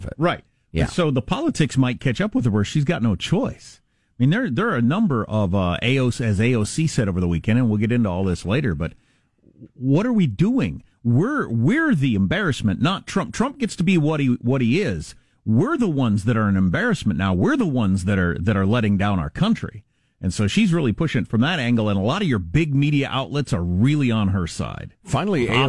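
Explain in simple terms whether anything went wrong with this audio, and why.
Nothing went wrong with this speech recording: no dropouts, glitches, distortion or other faults can be heard anywhere in it.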